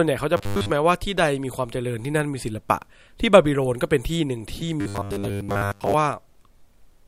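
From 0.37 to 0.70 s and again from 4.81 to 5.94 s, the speech takes on robotic sound from repeated short buffers: a rigid, metallic buzz at 100 Hz. It likely comes from a 10 ms chunk being looped for most of each stretch. The spectrogram shows evenly spaced 100 Hz harmonic lines, and the waveform shows identical 10 ms cycles.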